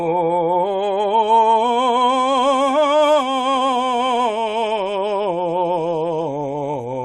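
Between 3.41 and 4.21 s the music hits a patch of repeated stalls (stutter). Packets were showing up late or slower than playback, so the jitter buffer kept running dry. Eight times in that stretch the receiver just held on to the last bit of sound until more arrived, about 72 ms of patching in all and nothing actually lost. Each hold is short, 13 ms at most, but together they make the music drag and hiccup.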